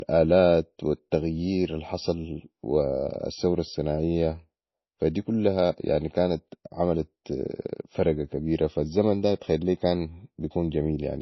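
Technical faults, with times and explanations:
Throughout: low-bitrate audio saved at a high bitrate. Nothing sits above 5.8 kHz, so the speech sounds dull and smeared up top. That's likely a very low-rate MP3, around 24 kbit/s, re-saved at a high rate, which can't restore what was already thrown away.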